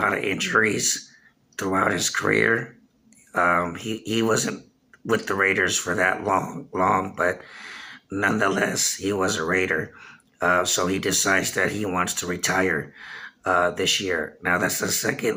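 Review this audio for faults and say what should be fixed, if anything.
Nothing stood out on listening, so there is nothing here that needs fixing.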